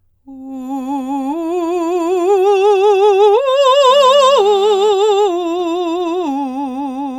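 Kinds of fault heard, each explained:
GSM phone buzz: A 2G phone close to the audio chain was in an active call, and its radio pulses, at about 217 per second, were rectified by the audio circuitry into a signal in their own right. In this music it comes in as a hard, raspy 217 Hz buzz, thick with harmonics and unrelated to the playing, running steadily from 3.90 to 4.89 s at about 22 dB below the music.
GSM signalling bursts: A 2G phone nearby, in a call but with its user silent, was transmitting only short groups of bursts, and the audio circuitry rectified those too. Straight after the steady buzz stops, from 4.93 to 6.25 s, the music picks up even ticks with a longer 217 Hz buzz twice a second. This pattern sits lower than the continuous buzz, roughly 30 dB beneath the music.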